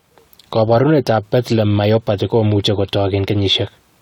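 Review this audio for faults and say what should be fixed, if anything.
Nothing in the signal calls for correction, as the speech holds continuous timing across the whole recording.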